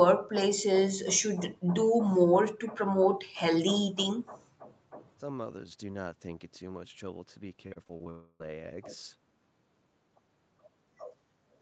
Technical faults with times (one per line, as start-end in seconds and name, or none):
7.67-8.08 repeated packet loss (robotic sound)
8.10-8.42 long network dropout